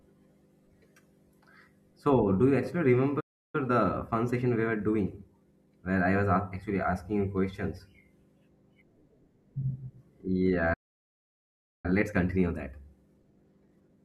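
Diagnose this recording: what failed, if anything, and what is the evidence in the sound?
Playback stage: a playback stall. At 3.20 s, right after "do you actually", the speech drops to silence for about 0.34 s, and at 10.73 s it goes silent for about 1.1 s. The likely cause is a starved buffer or blocked player thread.

Playback stage: time-compressed catch-up. From 3.55 to 5.77 s, ending before "where I was", speech runs 1.15 times fast, and from 11.86 s to the end it runs 1.25 times fast. The player is trimming and cross-fading small pieces to clear its backlog. Pitch stays normal, which rules out resampling, since that would raise the pitch.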